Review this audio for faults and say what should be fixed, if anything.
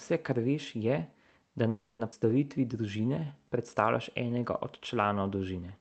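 A call audio freeze runs from 1.69 to 2.01 s. The last sound is stretched into a fading buzz for about 0.3 s, and the final 80 ms is silent. The likely cause is packets held up in transit, which drained the jitter buffer. When they arrived, playback resumed where it stopped, so nothing is lost but about 0.3 s of delay is added. To prevent it, improve network stability on the path or let the jitter buffer hold a larger margin during bursty periods.

A skip ahead follows at 2.11 to 2.14 s. Playback jumps forward with only a brief 10 ms join, and roughly 0.2 s of speech is gone. A stretch of audio was dropped while later audio was already waiting, which trims roughly 0.2 s of the delay the freeze had added, and the two sides of the cut butt together almost directly. To prevent it, drain excess delay after a stall gradually by time-compression rather than dropping whole chunks.

Jitter buffer slow-down occurs from 2.57 to 4.40 s and again from 4.94 to 5.19 s. 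The receiver repeated pitch periods to rebuild its reserve, so speech runs at 91% speed in the first stretch and 84% in the second, at unchanged pitch. This adds 176 ms and 47 ms, and sounds become drawn out. To prevent it, keep the buffer target steady so it does not need repeated refilling.

The call path is band-limited to about 8 kHz, consistent with Opus at a modest bitrate near 32 kbps.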